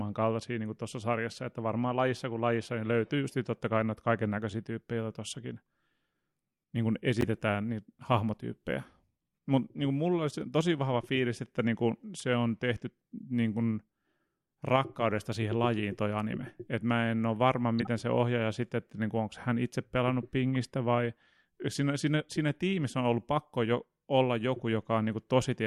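Three corrupt frames get decoded here. There's a sharp blip at 7.21–7.24 s after "niin kuin", a quieter, longer chirp at 17.79–17.87 s after "mä en ole varma", and a faint tick at 20.55 s. Flipped bits fed the decoder bad gains, dumping energy at wrong frequencies for one to three frames each.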